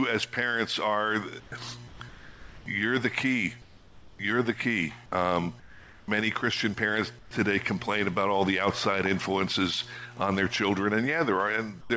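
The pauses in this call audio have their real background swapped for comfort noise: a flat, featureless hiss about 5 to 9 dB quieter sits at 1.40–1.52, 1.88–2.00, 2.09–2.66, 3.62–4.19, 5.60–6.08, 7.19–7.31 and 11.81–11.90 s. That's likely discontinuous transmission, where the sender goes quiet in gaps and the receiver fills in synthetic noise. The audio stops at 8 kHz throughout, consistent with a G.722 wideband call path.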